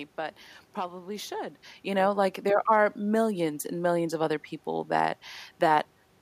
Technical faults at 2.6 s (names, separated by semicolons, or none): none